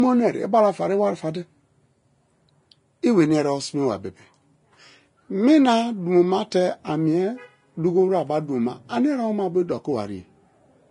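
Throughout this speech the treble sounds hissy and grainy, with roughened tones, smeared consonant attacks and nothing above 10.6 kHz, likely from Vorbis compression at a low bitrate, around 31 kbps, where the fine upper detail is quantised so coarsely it turns into noise.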